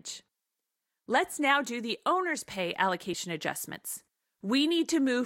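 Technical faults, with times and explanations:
3.13 s, compressed frames skipped: just after "do the owner's pay" the speech jumps ahead by about 10 ms. A few whole compressed frames were lost or rejected as damaged, so that stretch of audio is never played.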